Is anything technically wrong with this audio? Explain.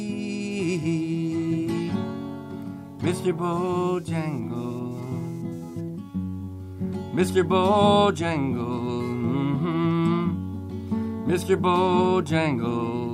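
Yes. Computer activity noise runs from 3.52 to 5.81 s: processor or graphics load shifts the shared audio ground, adding a buzzy, scratchy pulsing around 200 Hz, roughly 35 dB below the sound.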